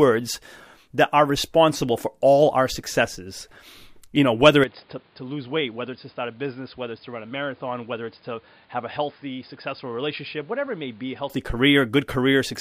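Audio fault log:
4.64–11.30 s, input switched to a poorer device: after "you know whether" the speech abruptly loses everything above 5 kHz, drops roughly 10 dB and gains a new noise floor about 30 dB down, with no gap. Capture likely moved to a narrower-band microphone, then returned.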